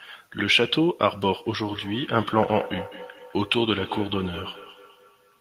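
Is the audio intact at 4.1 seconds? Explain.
No. At 4.1 seconds the speech is shadowed by a delayed copy of itself that returns roughly a fifth of a second after each word, peaking at about 14 dB below the direct speech. This feedback echo between two devices runs from 1.64 s to the end of the clip. Two devices in the same room share the call: one plays what the other's microphone sent, that microphone captures it again, and neither echo canceller removes sound played by the other device.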